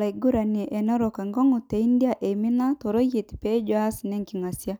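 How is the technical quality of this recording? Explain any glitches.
The technical quality of the recording is good, and there are no glitches to explain.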